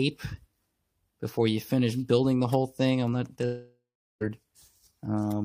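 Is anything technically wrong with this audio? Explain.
Yes. From 3.45 to 4.23 s there is a long network dropout, likely from packets failing to arrive. The receiver extends the last sound as a fading buzz or hiss, leaving about 0.39 s of silence before audio resumes with roughly 0.76 s of material lost.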